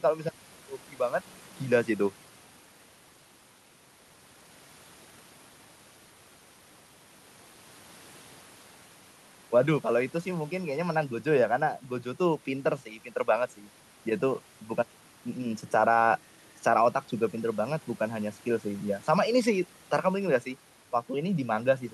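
No technical faults can be heard anywhere in the recording.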